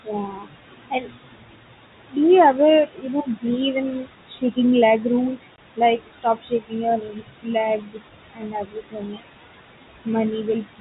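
Speech over a telephone line, with room noise about 11 dB below it, carries a background that sinks between phrases and rises under the voice throughout. These are noise suppressor artifacts: the suppressor pulls down bands it judges to be steady noise by about 19 dB, frame by frame. Stretches of the speech itself turn faint and swallowed at 0.04 to 2.17 s, 2.86 to 3.45 s, 4.02 to 4.58 s and 5.43 to 9.23 s, dropping by as much as about 22 dB. This is speech cut by the noise suppressor, which mistook soft parts of the voice for noise; roughly one and a half seconds of the opening stretch and about two seconds of the last one are affected. At 5.56 to 5.58 s a hard-edged gap of silence appears, packet loss filled with silence, consistent with one lost 20 ms packet.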